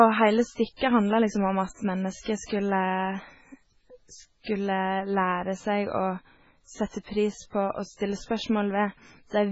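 A speech recording with heavy MP3 compression damage running through the whole clip. Nothing reaches above 7.7 kHz, a hard treble ceiling set by the encoder, and the weak spectral detail that remains flickers in and out between frames, giving a watery, swirling texture with chirpy sibilants and smeared onsets. That flicker separates it from a simple low-pass filter, which would only dull the sound. The damage likely comes from a very low bitrate, around 16 kbps.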